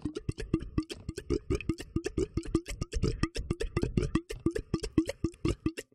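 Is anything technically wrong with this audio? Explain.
Yes, there's one glitch near the end. At about 5.33 s you get compressed frames skipped: a short stretch of the audio, somewhere around 50 ms, never plays, either because those frames are missing from the file or the decoder threw them out as corrupt. The sound jumps ahead by whole frames.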